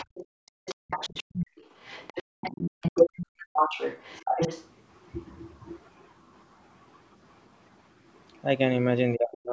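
Other side's voice leaking through, 0 to 0.26 s: a faint second voice sits well below the speech. This is likely loudspeaker echo that the canceller failed to remove. It returns from 0.46 to 2.23 s somewhat louder, then from 2.41 to 4.65 s at about the talker's own level, competing with it.

Background gated by the echo canceller, 0.26 to 0.88 s: the room sound drops by as much as about 39 dB, for around half a second in total. The canceller clamps the microphone while the loudspeaker plays, then releases it and the background returns.

Speech suppressed in double talk, 3.28 to 3.36 s and 4.2 s: while both sides talk, the talker's voice is pulled down, deeply in the first brief dip and only slightly in the second. From 9.15 s to the end it cuts out deeply again for almost half a second, likely because the canceller mistook the talker for echo.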